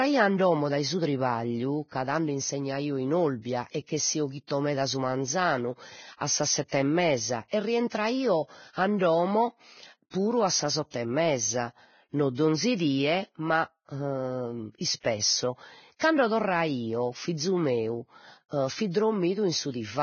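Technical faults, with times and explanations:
Throughout, Vorbis compression: the speech has nothing above 6.6 kHz and heavy codec damage, with hissy, grainy treble and blurred consonant attacks. The likely cause is a Vorbis encode at a very low bitrate, near 18 kbps, where the codec cuts the top band and quantises the remaining treble so coarsely that its detail turns into noise of similar energy. A plain low-pass filter would sound dull but clean, not granular.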